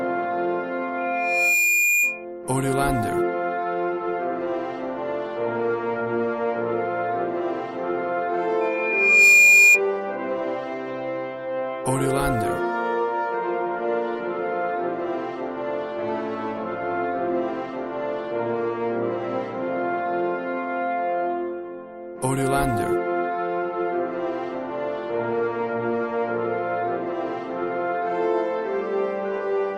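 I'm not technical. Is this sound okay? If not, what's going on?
No, there's loudspeaker feedback squeal: a mic hearing its own speaker, so a high whistle swells up within about a second, from 0.98 to 2.25 s and again, louder, from 8.61 to 9.82 s.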